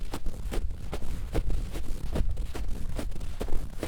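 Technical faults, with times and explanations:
No technical fault is audible anywhere in this sound.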